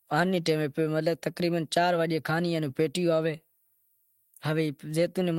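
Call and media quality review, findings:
No audible faults found.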